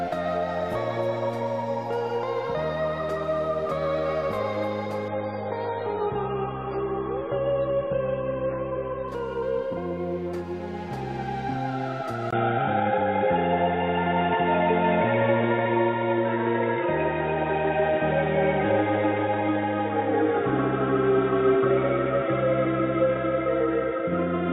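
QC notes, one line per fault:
5.08–9.08 s, adaptive stream at a lower bitrate: the treble abruptly vanishes above 4.8 kHz and the sound turns watery and smeared, with swirling codec artefacts, then full quality returns at 9.08 s with no gap at either edge. The character of the drop points to a fall from around 128 to 16 kbit/s MP3. On a spectrogram, a hard horizontal ceiling at 4.8 kHz runs across the stretch with blotchy, quantised texture beneath it, while the waveform stays continuous.
12.31–end, input switched to a poorer device: after a 20 ms dropout the sound turns dull and boxy, with nothing above 3.8 kHz, a level change of about 5 dB, and a new steady noise floor about 35 dB below the signal that persists to the end of the clip. The likely cause is a change of input to a narrower-band microphone or a headset call profile. A spectrogram shows a brief blank column, then a flat ceiling at 3.8 kHz and a raised noise band, and the waveform shows a step in envelope height.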